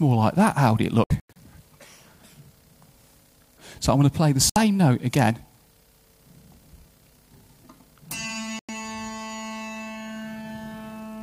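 The sound cuts out in short holes: a scattered cluster from 1.04 to 1.36 s (longest gap about 96 ms), then 4.50 s for 64 ms and 8.59 s for 96 ms. This is digital broadcast dropout, where the receiver mutes corrupted frames, apparently about 32 ms each, and that audio is lost.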